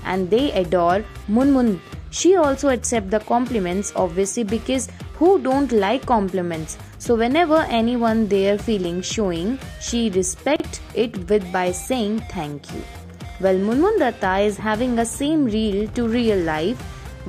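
At 10.56 to 10.64 s a brief jumble marks chunks out of order: two adjacent 40 ms blocks of audio play swapped, the one that should come first arriving a chunk late and sounding after its successor. This leaves three hard joins. Unlike a dropout, no sound goes missing and no gap opens, and unlike a stutter or repeat, nothing plays twice. The same material is simply heard in the wrong sequence.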